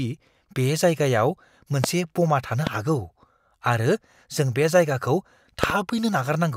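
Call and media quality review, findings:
Loud pops at 1.84–1.86 s (before "ब'मा थानो हागौ"), 2.67–2.69 s (after "ब'मा थानो") and 5.64–5.72 s (after "बे जायगाखौ", a double pop). Sharp transients roughly 15–20 dB above the speech, which continues underneath. Likely cause: a voltage step from a connector, switch, static discharge or driver glitch, shaped by the downstream circuits into a brief thump.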